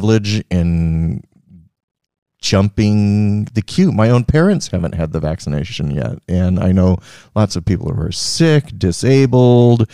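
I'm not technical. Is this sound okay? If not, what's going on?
No. Throughout the speech there is a faint 50 Hz buzz, heard only while someone is talking. This is a resampler restarted on every block: converting from 48 kHz to 44.1 kHz in separate 20 ms chunks leaves a tiny error at each chunk boundary, fifty times a second.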